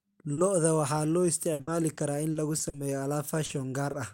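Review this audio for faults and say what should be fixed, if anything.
Short concealed packet loss occurs three times, at 0.33–0.39 s, 3.45–3.51 s and 3.91–3.95 s. The first two each cover about 40 ms of missing speech, and the last covers about 20 ms. In each case the audio arrived too late for the decoder. The receiver bridged the hole by extending the preceding sound and then rejoined the real signal. Each event is heard as a brief smear or wobble, and a short consonant may drop out.

Repeated packet loss (robotic sound) runs from 1.53 s to 2.75 s. Within that stretch there are six separate holes, the longest about 60 ms. Together they add up to 240 ms, roughly a fifth of the span. Each gap is patched by stretching the last sound, and the next gap follows quickly. This leaves the speech choppy, with pieces missing.

To prevent both, the network path needs to be stabilised, and the jitter buffer should be deep enough to absorb late packets before they are discarded.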